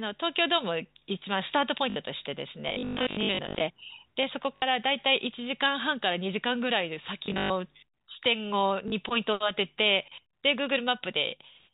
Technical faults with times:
1.90-1.96 packet loss with last packet repeated
2.69-3.61 robotic sound from repeated short buffers
4.56-4.62 packet loss with last packet repeated
7.26-7.50 packet loss with last packet repeated
8.88-8.92 packet loss with last packet repeated

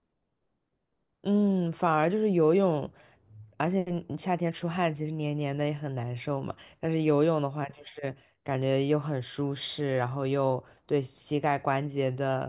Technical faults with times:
none

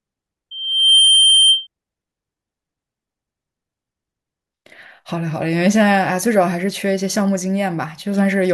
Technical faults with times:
0.51-1.67 loudspeaker feedback squeal

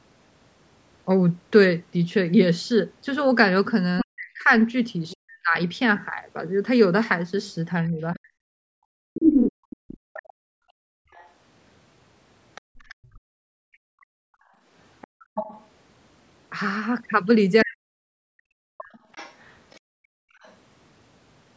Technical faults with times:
3.98-20.55 other side's voice leaking through
4.04-9.00 speech suppressed in double talk
9.52-15.29 background gated by the echo canceller
13.11-13.52 speech suppressed in double talk
17.64-18.98 speech suppressed in double talk
19.80-20.38 background gated by the echo canceller

